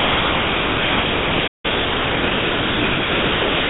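Sound dropped by the voice detector, from 0.0 to 3.69 s: the entire clip is steady comfort noise instead of the original sound. The sender's voice detector likely treated everything as background and stopped transmitting, so the receiver filled the whole 3.7 s with synthetic noise.

Playback stall, from 1.47 to 1.65 s: the comfort noise cuts out into silence for about 165 ms before resuming. The player likely ran out of data or had its thread blocked, leaving the output empty until it recovered.

Time-compressed catch-up, from 1.65 to 2.31 s: right after the gap, the noise runs at 1.25 times normal speed with unchanged pitch. The player is trimming its backlog by cutting out small pieces and cross-fading across the joins. The noise throughout stops at 4 kHz, which points to a narrowband call codec.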